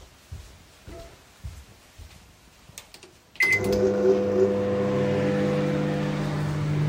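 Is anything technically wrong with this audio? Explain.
No, nothing technically wrong can be heard here.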